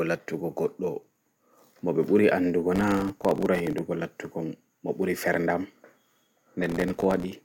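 Gritty, tearing crackle rides on the speech from 2.76 to 3.78 s and again from 6.63 to 7.33 s. This is processor overload crackle: dozens of very short buffers, around 1.5 ms each, missed their deadlines and dropped to silence, leaving dense hard-edged gaps.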